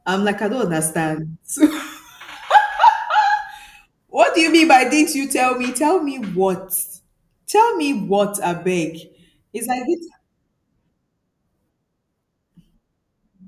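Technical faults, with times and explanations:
No technical faults.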